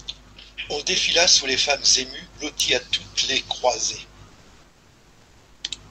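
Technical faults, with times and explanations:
4.27–5.59 s, comfort noise in place of the background: after "à toutes les croisées", the room tone, sitting about 35 dB below the loudest speech, is replaced for 1.32 s by a smooth, featureless hiss at the same level. Its grain and small fluctuations vanish until sound returns. This is likely discontinuous transmission in the Opus call codec: the sender pauses when its voice detector finds no speech, and the receiver synthesises noise shaped to the background, band-limited like the speech to about 8 kHz.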